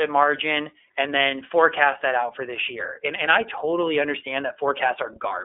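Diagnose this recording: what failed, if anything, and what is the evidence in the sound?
The speech sounds thin and boxed-in from start to finish, with a slightly rough, synthetic texture that stays plainly audible throughout. Nothing is present above about 3.7 kHz, and the band sits roughly between 300 Hz and 3.5 kHz. The failure is at the codec stage: iLBC codec compression. Each 30 ms frame is coded independently, which fits the 13.33 kbps mode, so the excitation lacks continuity between frames and the fine detail of the speech is lost.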